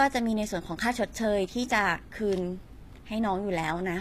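HE-AAC compression runs throughout this speech, likely: the treble is rebuilt from copied lower bands, so s sounds turn gritty and lispy, with nothing above 14.9 kHz, fitting about 24 kbps.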